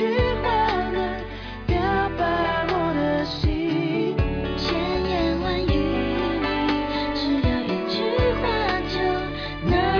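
Nothing stood out as a fault on listening.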